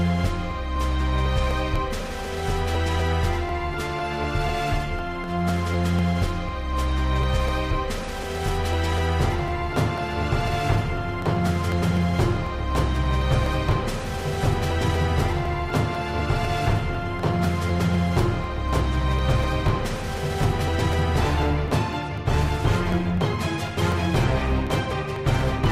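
From 0.26 s right through to 25.66 s there's a steady tick running under the sound, every 0.25 s or so, about four a second. That's the classic pattern of periodic USB or driver dropouts: something keeps stalling the bus or driver on a fixed schedule, and roughly a millisecond of audio gets skipped each time, so the waveform jumps and you hear a small click. Around a hundred of them in all, and they only show up where there's signal.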